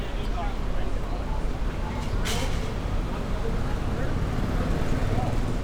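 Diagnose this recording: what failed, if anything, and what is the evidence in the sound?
Nothing in the chain failed: the sounds in the recording arrive with no dropouts, clicks, distortion or timing breaks anywhere along the way.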